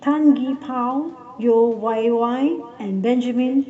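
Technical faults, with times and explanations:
Throughout, echo with no canceller: every phrase returns as a distinct repeat roughly 0.4 s later, about 19 dB quieter and thinner than the original, because the far end's loudspeaker feeds its microphone and nothing removes that copy before it travels back. Unlike room reverberation, which smears into a smooth decaying tail, this is one separate delayed copy, easiest to hear in the gaps after phrases, within audio that stops at 8 kHz.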